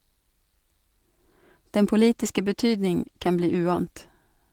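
From 2.05 s to 3.91 s the speech goes through a call bitrate drop. The connection's bandwidth estimate fell, so the encoder was forced to spend far fewer bits. The coarser coding sounds rough and watery and loses its top end, which fits a fall from about 32 to 15 kbps, held at its lowest for about 1.75 s. Unlike packet loss, the sound never breaks off or stutters. It stays continuous but degraded until quality returns.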